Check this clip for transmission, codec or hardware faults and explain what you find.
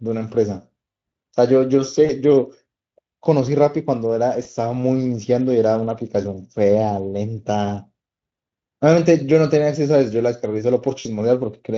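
The speech has three short dropouts from VoIP packet loss concealed by the speech codec, heard over light Speex coding.

VoIP packet loss concealed by the speech codec at 2.05–2.12 s, 4.43–4.47 s and 10.99–11.07 s: the decoder bridges gaps of 40, 20 and 60 ms by extrapolating the last pitch at falling gain. These gaps sound like brief, fading smears.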